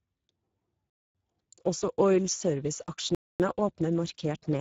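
A short speech recording carries the sound of the Speex codec throughout. The voice comes across hoarse and noisy, with the texture of a CELP coder that is short of bits for its excitation, a level of damage that fits a setting around 10 kbps. On a spectrogram the energy stops dead at 7.7 kHz. Two gaps between chunks also interrupt the audio, at 0.90 to 1.15 s and 3.15 to 3.40 s. Each is a 250 ms hole of silence with hard edges, and they are separated by a 2 s chunk. Nothing is missing; the sound simply pauses at each join, as happens when padding or a late-starting player leaves dead time between chunks. A waveform shows each one as a flat, abruptly cut section.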